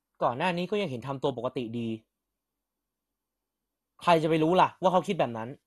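MP2 compression runs through the whole of this speech, and that codec is the likely cause of what is heard. The speech sounds dull, with nothing above about 12.2 kHz, and carries a plainly audible gurgling, granular roughness. Layer II coding divides the spectrum into 32 sub-bands and rations bits among them. Here the budget is too thin, which fits a low rate around 64 kbps, so the top bands drop out while those remaining are quantised coarsely and flicker.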